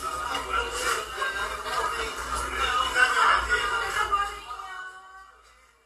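No technical faults are audible anywhere in this recording of sounds.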